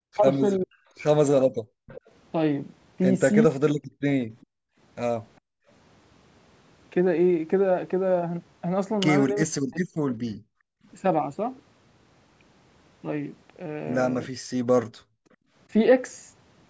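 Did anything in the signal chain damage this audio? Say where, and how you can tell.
Yes. Speech suppressed in double talk, likely in call processing: 0.04–3.58, 9.46–9.93 and 14.28–14.38 s. The echo canceller ducks the voice by around 40 dB, leaving notched gaps in the waveform.

Echo leak at 0.74–4.46 s, likely from a loudspeaker's uncancelled pickup. A faint copy trails the speech by 405 ms, about 20 dB down, appearing as delayed spectrogram ghosts.

Background gated by the echo canceller at 1.54–5.68, 10.36–10.86 and 14.88–15.54 s. Room noise drops about 40 dB while the loudspeaker plays, showing as dark vertical bands in the spectrogram.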